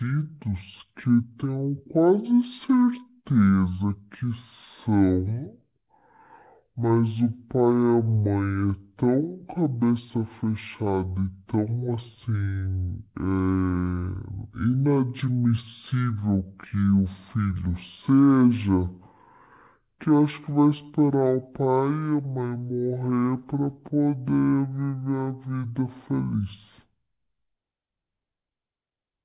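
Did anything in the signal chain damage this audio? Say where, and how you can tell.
Yes, and it's at playback. This is a wrong sample rate fault across the whole clip. The speech runs at exactly half speed and sits a full octave low, 12 semitones down, so everything sounds slow, dragged and deep. Pitch and tempo have dropped together by the same factor of two, which is the tell: the samples are being clocked out at half the rate they were captured at, with no resampling. That fits 16 kHz material played as if it were 8 kHz.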